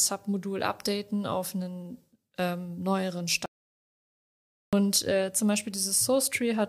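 The audio input was likely cut off for a moment, perhaps by a disconnected device, a failed link or an accidental mute, while the recorder kept writing zeros, causing an audio dropout to silence in this speech recording. At 3.46 s the speech stops abruptly mid-flow and the signal falls to silence, with no room tone underneath, until it snaps back at 4.73 s. About 1.27 s of speech is missing entirely and cannot be recovered.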